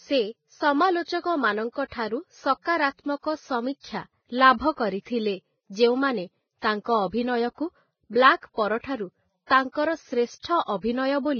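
Throughout the speech, the sound is grainy and hissy, and nothing reaches above 6.5 kHz. That is heavy Vorbis compression damage, likely from encoding at a low bitrate near 16 kbps. The treble was cut, and the remaining upper detail was quantised into rough noise.

From 10.62 to 10.68 s, a short hiss runs into a sharp attack. That is pre-echo. Coding noise sized for the loud onset spread back through its transform block, filling about 58 ms of quiet beforehand. The attack itself sounds soft and smeared.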